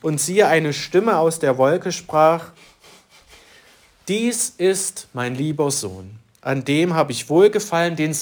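Sample clock jitter runs the whole way through: a wobbly converter clock, a few microseconds of timing error, leaves a roughness roughly 30 dB under the signal, strongest on loud, bright passages.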